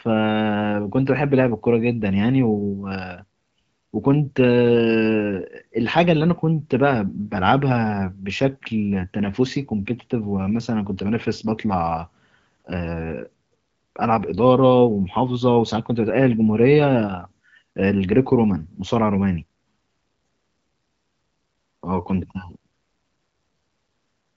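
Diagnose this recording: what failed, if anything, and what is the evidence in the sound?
Nothing failed; the recording shows no fault.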